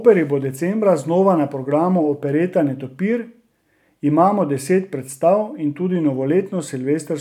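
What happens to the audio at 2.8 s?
Nothing goes wrong at 2.8 s; the speech there plays through intact, with no dropout, glitch or other fault at that moment.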